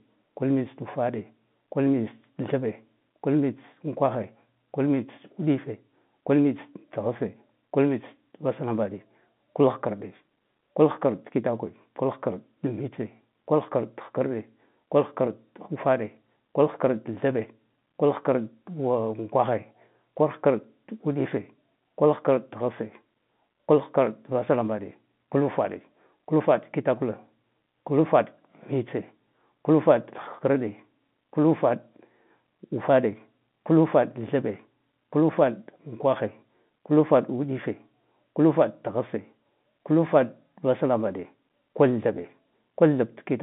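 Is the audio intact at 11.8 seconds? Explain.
Yes, the audio is intact at 11.8 seconds, with nothing audible beyond the narrow telephone band that G.711 telephone coding gives the whole line.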